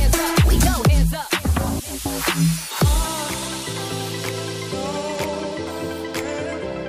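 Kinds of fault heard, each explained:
Loud pop: There's a single sharp pop from about 5.23 to 5.26 s that jumps out at about 10 dB above the surrounding sound, while the audio keeps going underneath it. It's likely a sudden voltage spike getting into the chain, from a plug, a switch, static or a driver hiccup, with the downstream circuitry smoothing that spike into the short, punchy burst you hear.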